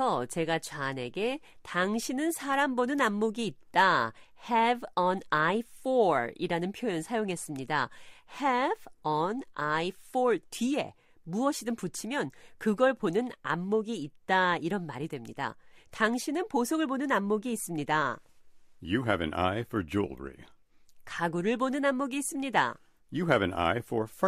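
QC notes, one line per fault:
No faults found.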